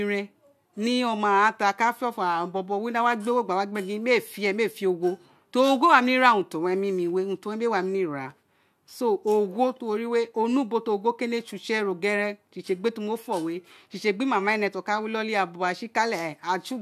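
The speech recording has no audible technical faults. Its timing, level and continuity give no sign of trouble anywhere along the capture or playback chain.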